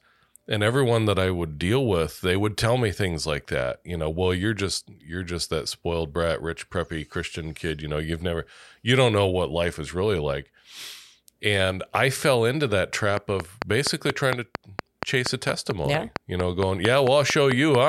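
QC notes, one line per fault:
13.17–17.76 s, train of clicks: likely interference from nearby equipment or a faulty connection or power supply injects a regular pulse about 4.4 times a second after "I fell into that", giving around twenty near-identical sharp ticks, roughly 20 dB above the speech, audible through pauses too.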